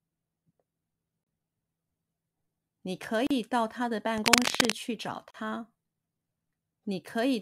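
At 1.23 to 1.27 s and again at 3.27 to 3.31 s the speech drops out briefly, about 33 ms and then 38 ms. These are gaps at a join of encoded pieces: separately encoded chunks were butted together with their start-up silence and end padding left in. The edges are smeared, and the speech resumes right where it left off.

From 4.18 to 4.73 s there's a patch of dense, ragged scratching over the speech, a little louder than the speech itself. That's cable scratch noise, likely a worn cable or connector being jostled so its contact keeps flickering.

Then at 5.31 to 5.34 s another 38 ms gap lands, keeping the 2 s spacing of the joins.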